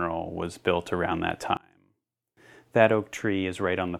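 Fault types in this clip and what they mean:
One channel inverted: speech falls about 29 dB from 1.57 to 2.37 s, likely from one channel's reversed polarity cancelling centred content when summed to mono.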